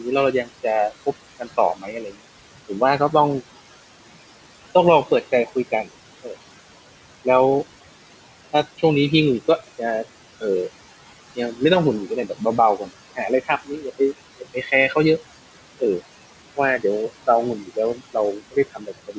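Noise suppressor artifacts run through the whole clip: the suppressor pulls steady background down by about 16 dB in each band it judges noise, so the gaps sink while residue flutters under the speech. On a spectrogram this shows as speckled, blotchy low-level noise that vanishes between phrases, all sitting below the 8 kHz ceiling of the G.722 call path.

Speech cut by the noise suppressor occurs at 0.02–3.14 s, 5.05–6.35 s, 9.59–10.43 s, 11.36–15.21 s and 16.56–19.18 s. Quiet speech was misread as noise and dropped by up to about 17 dB, roughly half a second in the first stretch, leaving swallowed consonants and faint word endings. On the waveform, tails collapse abruptly; spectrograms show gaps in the speech.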